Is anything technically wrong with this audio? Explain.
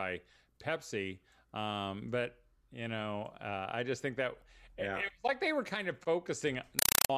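Yes. From 6.79 to 7.10 s the speech is replaced by very loud, harsh static that chatters at about 31 bursts a second, each burst of noise lasting about 4 ms before dropping to silence. This is a compressed stream played as audio. Encoded data, which fits an AC-3 (Dolby Digital) stream, was passed on as if it were ordinary samples instead of being decoded, so each data frame plays out as noise followed by zero padding.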